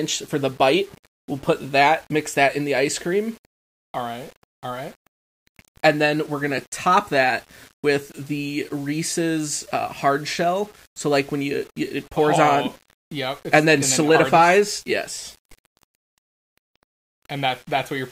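Low bit depth without dither runs throughout: the speech sounds gritty and grainy, likely from rounding to about 8 bits, leaving distortion roughly 30 dB below the voice.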